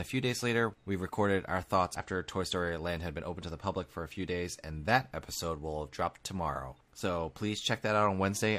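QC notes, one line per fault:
1.95–2.01 s, damaged data in a compressed stream: right after "we recorded our thoughts" a brief glitch replaces the speech, as the decoder misreads corrupted frames and loses sync before finding the next frame header.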